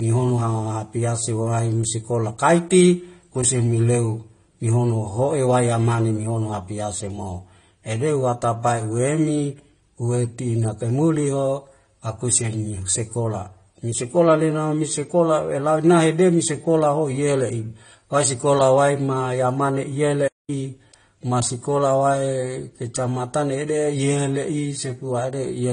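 From the start, the speech shows transcoding between lossy codecs. Nothing sounds above about 10 kHz, so the top end is dull and closed in. Two layers of compression artefacts sit together. The mix of artefacts fits a likely chain of an MP3 at a modest bitrate followed by a low-rate AAC-LC encode. The second encoder wasted bits on the first one's damage and added its own.

At 20.27 s the audio cuts out in mid-flow. Silence lasts about 0.21 s, until 20.50 s, and then the speech carries on. This is a playback stall. The gap is abrupt and breaks the rhythm of the speech. It likely happened because the player's buffer ran dry or its audio thread was briefly blocked, leaving the output with nothing to play.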